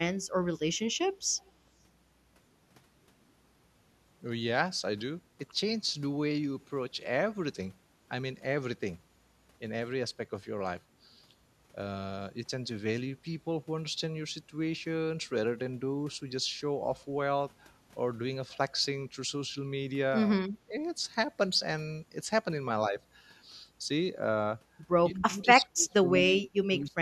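From 1.38 to 1.51 s a faint delayed copy of the speech trails behind it, about 194 ms late and very weak, roughly 40 dB below the direct sound. This is echo leak, likely from a loudspeaker on the far end whose echo canceller let part of the played-back signal return. On a spectrogram it shows as a ghostly, much dimmer repeat of the preceding harmonic pattern, shifted right by about a fifth of a second.

Speech suppressed in double talk occurs twice. At 20.43 to 20.75 s the level dips for around 200 ms, by roughly 20 dB at its deepest. From 25.15 s to the end the gating is much harsher, removing about 35 dB over roughly 1.5 s in total. The waveform envelope collapses abruptly, and the spectrogram shows the energy blanked out in patches.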